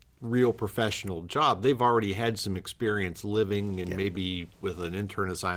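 It's a speech clip, and right after "already had some experience", from about 3.49 to 4.45 s, you get scattered short gaps: around seven small holes where packets went missing or arrived late. The receiver patched each one by carrying the last bit of sound forward, so they come across as brief ticks and smears. Each is around 10 ms at most, roughly 70 ms of patched audio in all, or about 7 percent of that stretch, and the span ends up about 11 ms longer.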